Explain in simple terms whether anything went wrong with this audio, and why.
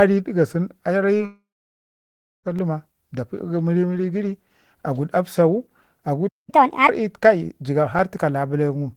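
Quite a few things go wrong in this speech clip, mostly around the first couple of seconds and again near the end.

At 1.17 to 1.21 s there's a short concealed packet loss. About 20 ms of audio arrived too late, so the receiver faked it by stretching out the sound just before. You hear a tiny smear or wobble rather than a clean gap.

Right after that, from 1.25 to 2.47 s, comes a long network dropout. About 1.2 seconds of audio went missing, most likely because the connection stalled. The receiver briefly carries on the last sound as a fading buzz, then goes quiet for roughly a second. The speech resumes later, with that chunk simply gone.

There are two blocks of digital silence, at 2.59 s (about 2 ms) and at 7.99 s (about 4 ms). For those instants the output dropped to silence, with no fade in or out. The hard edges give you a quick tick or click.

At 6.28 to 6.50 s there's a playback stall. 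The sound just stops mid-flow for about 0.2 s, most likely because the player briefly ran out of data or got held up. It then carries on.

Straight after the stall, from 6.50 to 6.89 s, there's a catch-up at higher speed. The player rushes through its backlog at 1.5 times normal speed to make up the lost time. Speech sounds hurried and noticeably higher, roughly seven semitones up, before settling back.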